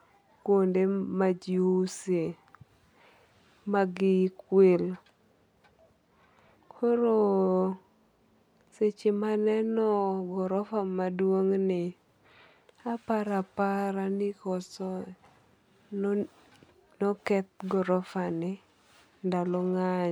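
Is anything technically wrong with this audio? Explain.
No, nothing technically wrong can be heard in this speech recording, and the signal stays steady and intact throughout.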